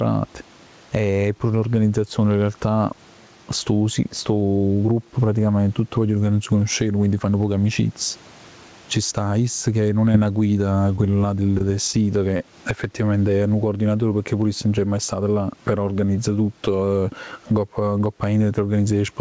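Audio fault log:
throughout, gain pumping: the gain ducks by around 15 dB under loud sounds, likely from excessive mic gain hitting a fast limiter, unlike steady room noise.
10.12–10.16 s, 10.96–11.00 s, 11.58–11.62 s, short concealed packet loss: about 20 ms of audio is lost each time and replaced by continuing the previous sound, heard as a brief smear or wobble.
12.37–12.42 s, short stall from a late packet: the last sound is held about 23 ms until the delayed packet arrives, so nothing is lost, unlike the concealed gaps, but timing slips.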